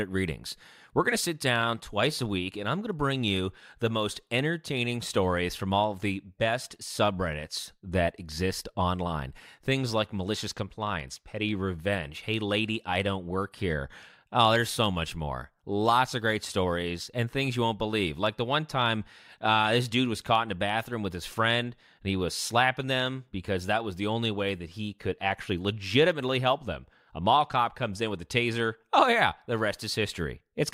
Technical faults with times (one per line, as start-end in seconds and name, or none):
0.00-30.74 block size mismatch (truncated)